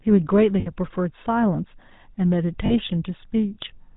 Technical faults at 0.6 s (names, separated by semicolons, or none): GSM full-rate codec; lost GSM frames